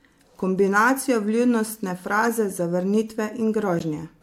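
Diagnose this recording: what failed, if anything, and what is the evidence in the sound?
Corrupt frame decoded, at 2.24 to 2.30 s and again at 3.79 to 3.81 s, in the codec stage. Each event is a short chirp or burst of noise, peaking at about -15 dBFS. The first lasts about 60 ms, which fits a run of a few damaged frames; the second, about 24 ms, points to a single frame. Flipped bits in the compressed data made the decoder rebuild those frames with wrong gains and spectral codes, misplacing energy in frequency.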